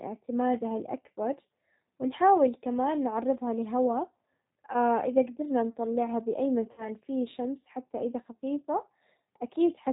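Throughout, the speech passes through a low-rate G.729 codec, plainly audible, which fits 8 kbit/s: nothing above 4 kHz survives, and the sound is rough and synthetic. From 6.72 to 6.89 s, VoIP packet loss concealed by the speech codec removes 60 ms of audio, pointing to about three lost packets. The decoder stretches the last sound into a buzzy tone or coloured noise that fades, then recovers weakly.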